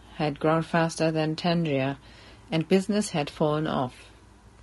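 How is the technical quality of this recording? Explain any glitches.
The speech has plainly audible low-delay AAC compression throughout. Voiced sounds turn rough and grainy, with noise between pitch harmonics and a thin top band. This is likely AAC-ELD at about 32 kbps. Its short frames blur harmonics, which sets this graininess apart from the swirly artefacts of standard AAC.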